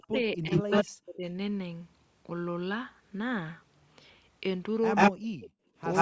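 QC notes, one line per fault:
0.0–0.14 s, 0.37–1.24 s and 5.11–5.33 s, speech suppressed in double talk: the speech dips sharply, as far as about 40 dB down at its deepest, for roughly 150 ms, 500 ms and 200 ms. This is likely an echo canceller that heard both sides at once and turned everything down. What sets it apart from gating is that the speech itself drops away, not just the room tone between phrases.
0.36–0.84 s, 4.95–5.11 s, 5.4–5.5 s and 5.93–6.01 s, echo leak: a second copy of the speech trails the original by 136 ms. In the first stretch it is about 5 dB above the speech, at 4.95 s and 5.93 s about 10 dB above it, and at 5.4 s about 15 dB below. This is likely far-end loudspeaker sound the canceller failed to remove. The fixed 136 ms lag separates it from room reverberation, which would smear rather than repeat.
5.61–5.75 s, background gated by the echo canceller: the room sound drops by about 19 dB for roughly 150 ms and then returns as the canceller releases the microphone. 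Unlike double-talk suppression, only the background tone collapses here. The dip is brief, more like a gate closing than speech being eaten.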